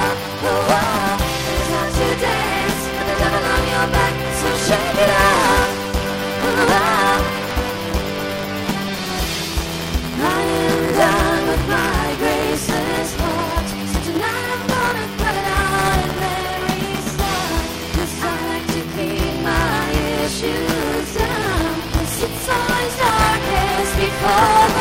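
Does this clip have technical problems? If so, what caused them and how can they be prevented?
Yes. Buffer tearing runs through the whole clip as a robotic 200 Hz buzz that appears only while sound is present. The writer and the hardware reader of the ring buffer have drifted so they cross inside every 5 ms period. Roughly a tenth of each buffer replays audio from about 15 ms earlier, with hard joins on both sides. The waveform shows a step discontinuity every 5 ms. The spectrogram shows vertical lines at that spacing and a comb of harmonics at multiples of 200 Hz. To prevent it, keep the write pointer a safe margin ahead of the read pointer by using adequate buffering, proper period synchronisation, and underrun detection.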